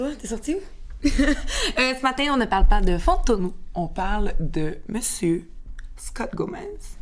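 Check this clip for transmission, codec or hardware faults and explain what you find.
One fault is present: a wrong sample rate. From 3.40 s to the end, playback runs at 0.919 times normal speed. This fits 24 kHz audio being clocked out at 22 kHz without conversion. Pitch and tempo drop together, about 1.47 semitones lower, sounding slower and deeper.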